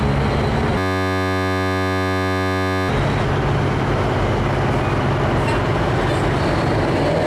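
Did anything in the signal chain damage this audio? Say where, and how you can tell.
Yes: a system hang loop at the driver/buffer stage, 0.78–2.89 s. A 10.67 ms slice repeats identically as a steady 93.8 Hz buzz, fitting a 512-sample buffer, rather than silence or a dropout.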